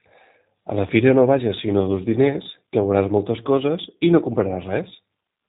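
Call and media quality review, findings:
G.729 codec damage, whole clip: speech band-limited, nothing above 3.8 kHz, with rough, slightly synthetic texture. Points to G.729A at 8 kbit/s rebuilding speech from a filter, pitch predictor and sparse pulses. Unlike plain narrowband telephone filtering, the model-based roughness persists.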